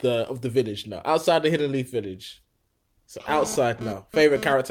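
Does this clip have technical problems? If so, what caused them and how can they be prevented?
Yes. A GSM phone buzz runs from 3.29 s to 4.53 s, a hard, raspy tone at 217 Hz with a dense stack of harmonics, sitting about 12 dB below the speech. A nearby 2G handset transmitting bursts during a data transfer was rectified by the audio circuitry, turning the radio pulses into an audible buzz. Keeping phones away from microphones, cables and interfaces, or switching them to airplane mode, prevents it.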